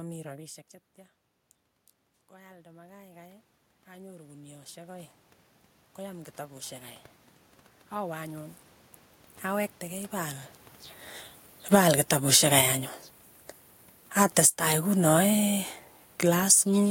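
Automatic gain rising runs from 2.3 to 10.5 s in this speech recording: the input level drops by about 16 dB, and the gain control slowly pushes its gain up by about 20 dB, so voice and room noise swell together. Shorter rises follow at 11.91 to 12.94 s (about 4 dB) and 14.51 to 15.01 s (about 8 dB). Automatic gain falling overlaps these at 11.59 to 12.61 s (about 4 dB) and 14.1 to 16.66 s (about 5 dB). The control judges the signal too loud and eases its gain down, so the voice and background sink together, making the level hunt back and forth.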